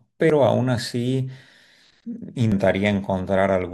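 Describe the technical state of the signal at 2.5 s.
At 2.52 s the speech jumps ahead by roughly 150 ms, a couple of compressed frames skipped, each about 85.3 ms, leaving an abrupt jump at the join.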